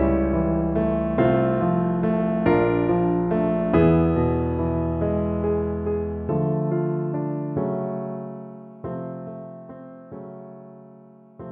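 From 8.14 to 9.72 s there is zipper noise. The level drops by roughly 10 dB. It falls in coarse steps, around fifty a second, with no smoothing between them. Each step clicks. The result is a fast ticking that rides on the sound during the fade.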